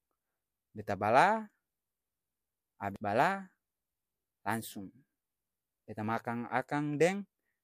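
A speech clip with one glitch: at 2.96 s there's a quick blip from damaged data in a compressed stream, where the decoder briefly loses sync on corrupted frames.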